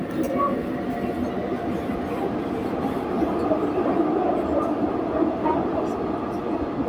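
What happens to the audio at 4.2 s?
Nothing goes wrong at 4.2 s; the audio plays through that moment intact, with no dropout, click, distortion or other fault.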